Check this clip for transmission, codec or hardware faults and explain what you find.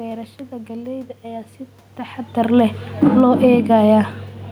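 Two automatic gain faults show up late in the speech, one after the other. The room noise and the level change near 2 s, where the talker shifts position, are not system faults.

Automatic gain falling runs from 2.87 to 3.44 s, just after "taxadar leh". The gain control judged the input too hot and pulled its gain down by about 6 dB over roughly half a second. Speech and room background sink together. That shared drop marks it as gain, not distance from the microphone.

Automatic gain rising follows from 3.36 to 4.05 s, overlapping the end of the fall. The controller now reads the signal as too quiet and pushes its gain back up by about 4 dB over about 0.7 s. Speech and background swell together. The level ends below where it started, so the clip sounds pumped rather than steady.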